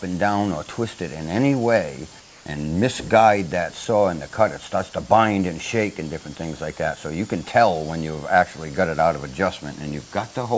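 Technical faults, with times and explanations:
2.20–2.46 s, comfort noise in place of the background: for about 260 ms the real background, sitting about 27 dB below the loudest parts, gives way to a steady, featureless hiss about 3 dB quieter, with its texture gone until the sound resumes. The cause is likely discontinuous transmission: the sender stopped sending, and the receiver filled the gap with synthetic noise roughly matched to the background's spectrum, band-limited to 8 kHz like the G.722 call path.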